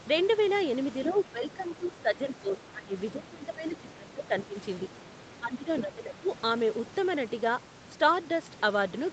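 An echo canceller likely could not separate this speech from loudspeaker echo while both sides talked, and turned it down. The result is speech suppressed in double talk at 1.12–2.19 s, 2.35–2.95 s, 3.15–4.55 s and 5.38–6.27 s. In each stretch the speech dips in patches by about 10 to 15 dB.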